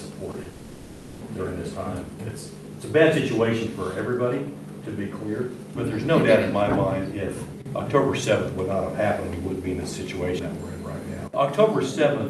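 At 0.31 s and again at 0.43 s, there is short concealed packet loss. About 20 ms of audio went missing each time. The decoder patched each gap by extending the preceding sound, heard as a brief smear or wobble.

From 0.49 to 1.23 s, about 0.72 s is replaced by a continued, decaying buzz or hiss with no silence. This is likely a long network dropout. The real audio resumes afterwards, with that stretch lost. Above roughly 12 kHz the sound is cut off, which fits Opus on the call path.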